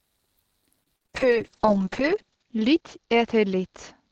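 Speech that turns choppy and robotic between 0.83 and 1.16 s, with five short holes in a third of a second, the longest about 40 ms. Nearly half that stretch is a smeared, buzzy continuation of the preceding sound, and about 120 ms simply drops out. This is repeated packet loss: packets kept arriving late or not at all, and each gap was patched by stretching the last sound before the next one hit. From 1.18 s to the end, the speech goes rough, watery and dull, and it is at its coarsest for about a second. The top end falls from 20 kHz to 8 kHz. That is a call bitrate drop. The bandwidth estimate fell and the Opus encoder was pushed from around 32 kbps down to about 6 kbps, so it coded far more coarsely and cut away the high frequencies.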